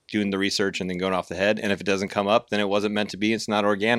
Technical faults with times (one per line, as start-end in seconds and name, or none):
0.57 dropped buffer (overrun)
2.08 dropped buffer (overrun)